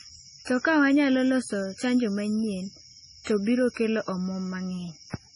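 Throughout the speech, likely MP3 compression starved of bits, which fits roughly 24 kbps, cuts everything above 10.6 kHz and drops weak detail, leaving heavily watery, swirling sound.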